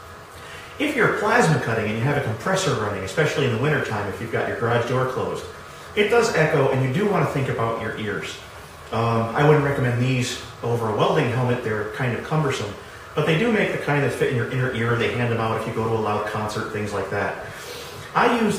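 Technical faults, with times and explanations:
No technical faults can be heard in this clip.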